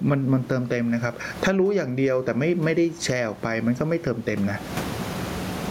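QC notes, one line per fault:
throughout gain pumping: The speech level swings by around 25 dB, squashing loud and soft parts together. Likely mic gain set too high, with a fast limiter clamping down.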